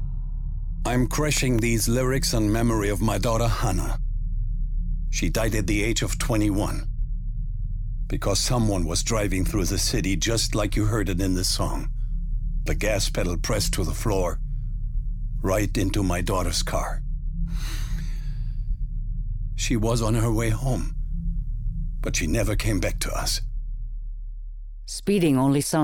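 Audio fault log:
1.37 to 2.23 s, CD scratch ticks: five quick clicks, the longest around a millisecond, as a scratch defeats error correction and the player patches the samples.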